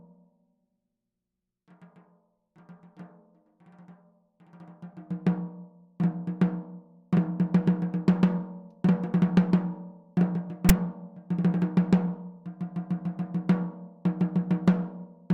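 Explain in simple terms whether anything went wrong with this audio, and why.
Something went wrong at 10.69 s: file tags played as audio. A small block of text information stored inside the file was read as if it were sound, producing a very brief, loud rasp with hard edges.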